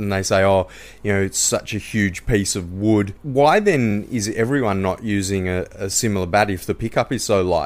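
At 1.89 s, between "know it's such a" and "piece of wood", and again at 5.93 s, after "not using a a", there's an overlapping chunks fault: 2-second chunks restart 20 ms early, replaying a sliver that clicks.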